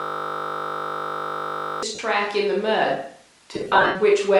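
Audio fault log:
throughout: Bluetooth LC3 compression. The speech carries a plainly audible grainy, breathy edge with a dulled top end, the kind of thing you get when a transform codec runs lean and swaps the upper spectrum it can't afford for shaped noise. The 7.5 ms framing and the amount of damage point to LC3 at around 48 kbps, so this is likely a Bluetooth LE Audio link doing the squeezing.
0.0–1.83 s: system hang loop. The clip opens with this already going. A single 20 ms slice of audio repeats exactly, roughly 90 times over, so what you hear is a steady 50 Hz buzz instead of speech. That's the sound of the machine or driver freezing while the sound hardware keeps cycling one short ring buffer. A loop that short fuses into a tone, not a stutter.
1.95 s and 3.54–3.96 s: lost LE Audio frames. The first event is a brief 37.5 ms gap where the sound turns into a quick noisy smear. The second spreads 255 ms of losses across about 405 ms, and the longest run is around 70 ms. 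There the smear sags toward quiet and then recovers. When frames go missing, the decoder keeps replaying the last spectrum with scrambled signs and fades it, so tonal detail turns to hiss.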